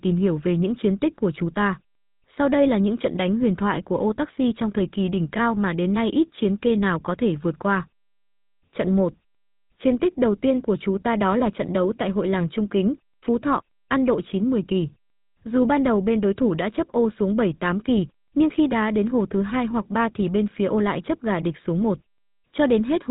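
From start to finish the speech has a buzzy, gravelly roughness, plainly audible, with a dull top end where nothing reaches above about 3.8 kHz. This is the GSM full-rate codec, which fits a 13 kbps stream: the encoder models the vocal tract and excites it with a sparse train of regularly spaced pulses, discarding two of every three excitation samples. That coarse excitation produces the grating texture, while the narrow telephone band removes the brightness.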